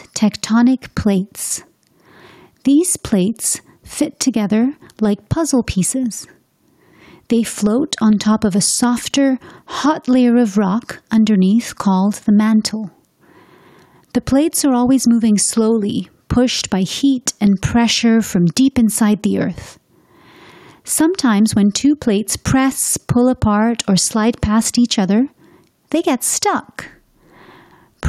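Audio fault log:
Throughout: gain pumping. The gain swings about 5 dB. A fast limiter is likely fighting excessive input gain.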